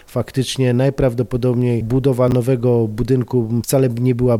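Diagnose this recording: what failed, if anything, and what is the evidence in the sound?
A brief garbled, jumbled moment between 2.28 and 2.32 s points to chunks out of order at the driver or buffer stage. One 10 ms block was written late and plays after its successors, which fits a displacement of three blocks. Nothing is missing, but the reordering leaves three hard joins.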